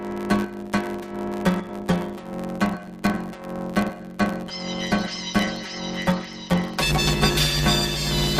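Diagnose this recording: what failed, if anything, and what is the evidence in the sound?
The fault is planar audio read as interleaved, at the driver or buffer stage where sample formats are handed over. Through the whole clip the sound carries a robotic buzz at about 94 Hz, with no octave shift. Each block of roughly 10.67 ms, which fits a 512-sample buffer, holds all of one channel and then all of the other, but it is read as alternating pairs. Each half therefore plays at double speed, once per channel, and the overall pace stays right. The block rate itself becomes the buzz. A sample-rate mismatch would shift the pitch and the tempo, and the buzz rules out dropouts, which leave gaps instead.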